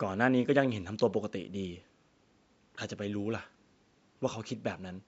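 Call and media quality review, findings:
No faults found; audio path behaving as expected.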